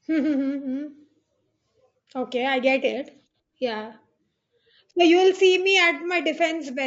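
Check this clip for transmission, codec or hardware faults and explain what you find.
Two faults are present: a codec coding the whole clip too coarsely, and one brief dropout that the decoder patched over.

Throughout the clip, the speech is likely passing through low-delay AAC compression of the AAC-ELD kind used for video calls, at a rate that sounds like about 32 kbps. The bit budget runs thin, so noise fills the gaps between harmonics. The damage is plainly audible: the voice has a rough, grainy texture, and the upper band sounds thinned and synthetic.

At 5.36 to 5.40 s, just after "you will", there is AAC frame loss with concealment. About 30 ms of coded audio never arrived, which fits a single lost frame. The decoder covered the hole by reusing the last good spectrum with its detail randomised. Because the gap is so short, it does not fade to silence. It comes through as a quick smeared, noisy or phasey blip in the speech.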